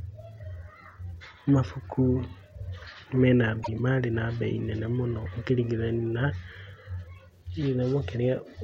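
At 3.59 s, just after "me na", damaged data in a compressed stream causes a disruption of about 0.1 s before "marĩ na bei nene". The decoder misreads corrupted frames, then resyncs. A spectrogram shows a broadband smear, the waveform an abrupt discontinuity.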